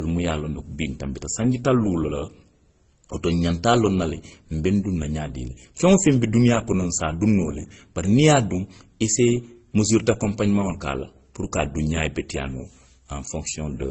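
Throughout the speech nothing is heard above 8.1 kHz, and two kinds of coding damage overlap: swirly, smeared MP3-style artefacts beneath Opus's grainy texture. That layering, unlike a single codec's signature, points to transcoding between lossy codecs, likely low-bitrate MP3 re-encoded as Opus.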